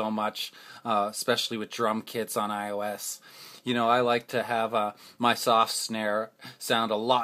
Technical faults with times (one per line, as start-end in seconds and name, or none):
none